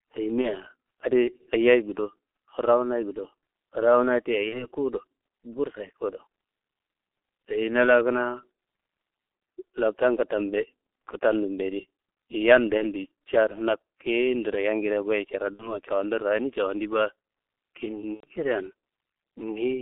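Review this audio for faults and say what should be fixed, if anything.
Throughout, the speech carries G.723.1 codec damage: band-limited to roughly 300 Hz to 3.4 kHz, heavily muffled and hoarse, with smeared consonants, which fits a 6.3 kbit/s G.723.1 link whose slow-updating vocal model blurs fast transitions. Unlike plain telephone band-limiting, the roughness and blurred onsets come from coarse modelling, not filtering alone. Moving to a wideband codec such as G.722 or Opus at a higher bitrate would prevent it.

VoIP packet loss concealed by the speech codec appears at 0.42–0.53, 4.49–4.67, 12.78–12.85, 15.53–15.79 and 18.15–18.27 s. The decoder stretches its last pitch and filter into a fading buzzy tone or coloured noise, then recovers sluggishly. The gaps fit one 30 ms frame each for the first three, two at 15.53 s and three at 18.15 s. Unlike a hard dropout, there is no click, just a smeared, decaying stand-in, which at 18.15 s is muted from the third lost frame. 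A larger jitter buffer with forward error correction or redundant packets would prevent it.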